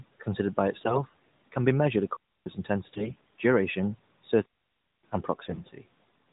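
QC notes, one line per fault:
0.80–1.03 s, 2.94–3.33 s, 5.44–5.70 s: AMR bit errors. Between "considered by" and "can be measured", and at the two later spots, the speech keeps its pitch and level but turns hoarse, scratchy and gargly. Flipped low-priority bits, roughly a tenth at the worst, misplace excitation pulses and skew the fine gain and spectral values. Unlike a dropout, the sound never stops.
4.46–5.04 s: digital wireless dropout. A clean hole of near silence lasting about 0.58 s, with only a very short fade and no burst of noise before or after. The receiver muted once the link lost too much data. Unlike bit errors, nothing garbled comes through, and the band-limited character of the AMR narrowband codec around it is unchanged.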